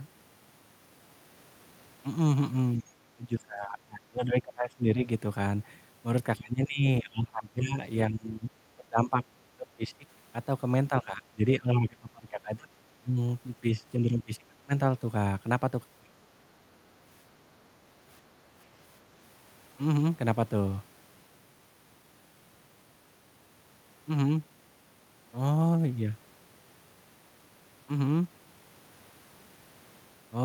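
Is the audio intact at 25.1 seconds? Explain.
Yes, the speech at 25.1 seconds is intact, with no audible fault at that moment.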